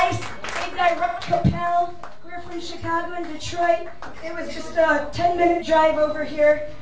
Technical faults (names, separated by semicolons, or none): DC offset; AAC frame loss with concealment